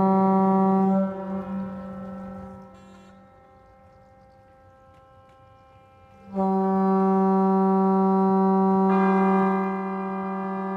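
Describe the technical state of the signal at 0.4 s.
At 0.4 s the signal is intact, with no fault present at that moment.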